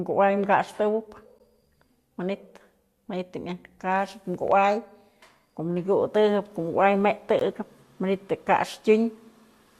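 At 1.39 s and again at 7.39 s the speech drops out abruptly for a moment, about 14 ms the first time and about 18 ms the second. This is a gap between stream segments: the timestamps of consecutive segments fail to line up, and the player fills the missing interval with silence. The holes have hard edges, and their six-second spacing matches the segment length. Nothing is lost; the audio is pushed later.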